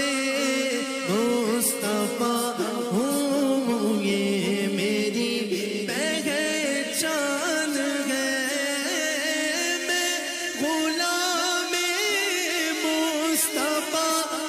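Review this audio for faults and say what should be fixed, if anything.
Nothing stood out on listening, so there is nothing here that needs fixing.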